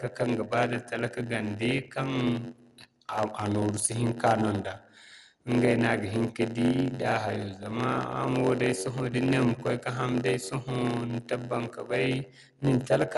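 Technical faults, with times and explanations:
throughout: block size mismatch (padded). One stage hands over blocks about 8% shorter than the next stage expects, and the shortfall in each block is filled with silence. Those tiny gaps recur about 92 times a second, so a steady buzz near 91.9 Hz sits under the speech. Because every block is stretched with padding, the speech runs slow at 0.919 times normal speed, while its timbre stays about where it should be.
throughout: Bluetooth LC3 compression. The speech has a plainly audible breathy, grainy edge, and there is nothing above 11.6 kHz. The likely cause is a low-bitrate LC3 link of the kind used by Bluetooth LE Audio, which fits 10 ms frames at around 48 kbps. At such a rate the encoder cannot afford the upper spectrum, so it zeroes much of it and substitutes shaped noise. That substitution gives the speech its breathy, grainy texture instead of real detail.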